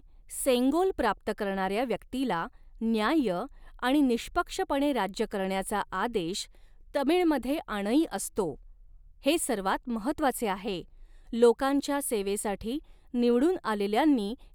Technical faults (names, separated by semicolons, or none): none